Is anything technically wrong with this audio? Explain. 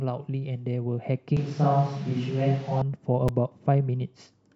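Yes, there are two faults. From 1.37 to 2.82 s the speech turns roomy, hollow and thinner in the bass, about 5 dB quieter, with room noise about 25 dB below the speech. This is likely a switch to a distant microphone. On a spectrogram the low end thins and the noise floor rises, with hard edges at both switches.

At 3.28 s a repeated buffer occurs: a 5 ms piece plays twice because new audio arrived late, giving a brief click. The waveform shows a duplicated segment with a hard join.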